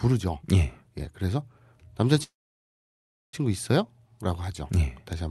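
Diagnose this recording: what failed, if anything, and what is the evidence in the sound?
A call audio freeze sits at the network and jitter-buffer stage. From 2.23 s to 3.35 s the speech stops. A brief decaying continuation of the last sound gives way to near silence for roughly a second. When the speech resumes, it carries on from where it broke off with no content lost, and everything after it is pushed about 1.1 s later. The likely cause is delayed packets draining the jitter buffer, so the receiver inserted fill until they arrived. The audio's top end stops around 12 kHz, consistent with the call codec's band limit.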